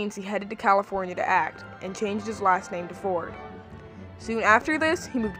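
No technical faults can be heard anywhere in the clip. Nothing in the audio suggests a break or disturbance in the way it was captured or passed along.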